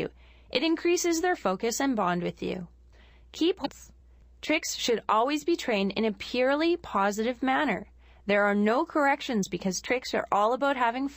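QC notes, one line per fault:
3.62–3.66 s, damaged data in a compressed stream: a short stretch of the encoded bytes was corrupted, so the decoder misread those frames, lost sync and searched for the next valid frame header, leaving a garbled blip about 40 ms long.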